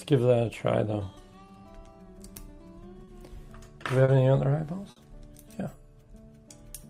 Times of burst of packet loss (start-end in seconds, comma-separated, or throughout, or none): 4.90-4.97